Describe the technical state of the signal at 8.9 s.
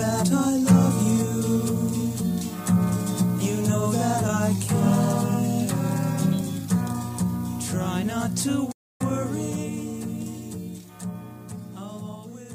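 At 8.9 s the output is silent, in the middle of a playback stall running from 8.71 to 9.01 s. The sound stops abruptly for roughly 280 ms and then resumes. The likely cause is the player running out of buffered data or its thread being blocked.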